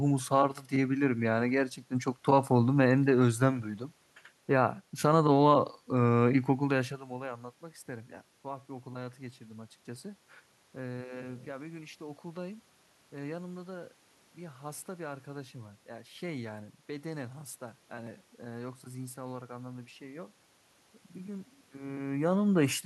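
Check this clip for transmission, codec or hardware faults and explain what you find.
No transmission, codec or hardware faults are audible here.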